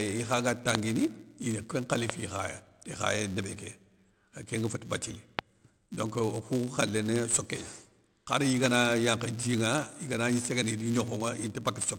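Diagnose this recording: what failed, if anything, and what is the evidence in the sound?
Filter restarted on every block, in the processing or buffer stage. A steady buzz at 172 Hz runs under the speech for the whole clip and grows and shrinks with its level. That rate fits a 256-sample block at 44.1 kHz. Each block starts the filter from silence, so every boundary gets a small transient. On a spectrogram this shows as a harmonic comb at 172 Hz multiples. The waveform shows evenly spaced ticks.

Loud pops occur at 0.75 s (just after "ikha ga"), 2.10 s, 5.39 s (between "kénga féti bathily" and "donc okou khalé ni") and 8.66 s. Each is a single sharp pop. Three are about 20 dB above the speech, and the one at 5.39 s is about 25 dB. The speech continues underneath. The likely source is a step in the analogue wiring, such as a connector or static discharge. Each pop appears as a vertical broadband stripe on the spectrogram and as a tall isolated spike in the waveform.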